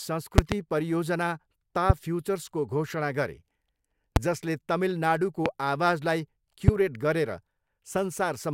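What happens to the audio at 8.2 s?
Nothing goes wrong at 8.2 s: the speech carries on intact through that moment, with no dropout, click, distortion or other fault to be heard there.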